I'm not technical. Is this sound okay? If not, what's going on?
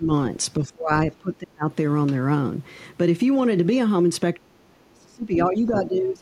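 No. Speech suppressed in double talk: the voice dips or cuts out from 0.00 to 0.08 s, 0.60 to 0.91 s, 1.19 to 1.66 s, and 4.34 s to the end, sometimes almost to silence. Likely, both sides spoke at once and the echo canceller turned everything down.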